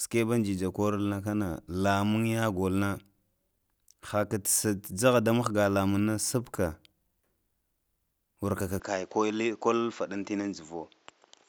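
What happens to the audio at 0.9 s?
Nothing goes wrong at 0.9 s; the speech carries on intact through that moment.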